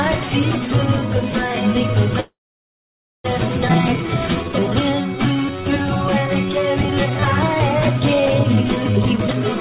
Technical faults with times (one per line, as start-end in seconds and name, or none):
2.20-3.27 call audio freeze
3.68-3.72 skip ahead
3.98-5.83 jitter buffer slow-down
6.28-7.22 jitter buffer slow-down
7.94-8.94 jitter buffer slow-down
8.97-9.55 jitter buffer speed-up